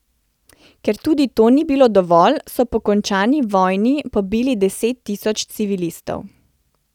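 No technical faults can be heard anywhere in the recording, with the signal holding steady and continuous throughout.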